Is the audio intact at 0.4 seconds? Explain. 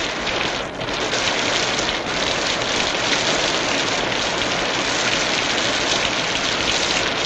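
No. A resampler restarted on every block runs throughout: each 100 ms block converted from 44.1 to 48 kHz leaves edge errors, ticking at 10 Hz only while sound plays.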